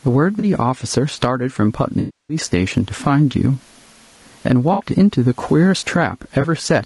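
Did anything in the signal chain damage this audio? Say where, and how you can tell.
Yes. At the call-processing stage, the room noise sits about 44 dB below the speech, and the level pumps with a swing of around 15 dB, squashing loud and soft parts closer together. This is gain pumping, likely from excessive input gain driving a fast limiter. On the waveform, the noise floor rises and falls; on a spectrogram, the background bands breathe in step with the speech.

At the codec stage, the speech sounds rough and grainy throughout, with a hiss between harmonics and a synthetic-sounding top band. This points to low-delay AAC compression, likely AAC-ELD at a low bitrate, around 32 kbps. Its short frames resolve pitch poorly. A spectrogram shows smeared harmonics, noise filling the gaps between them, and a blocky upper band.

At the network stage, there is AAC frame loss with concealment at 0.39–0.45 s, 1.99–2.37 s, 4.73–4.83 s and 6.41 s. 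The short patches, about 20 to 60 ms long, sound smeared and phasey. The 300 ms loss near 2 s decays to a very faint noise floor and fades back in. On a spectrogram, these show as frozen, blurred columns, and the long one fades into a gap.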